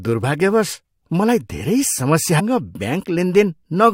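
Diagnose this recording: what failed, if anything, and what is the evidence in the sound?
At the network and playback stage, the likely cause is a stream segment skipped: one piece of the segmented stream failed to load and the player moved on to the next. At 2.39 s the speech jumps abruptly ahead, with a brief blip marking the join.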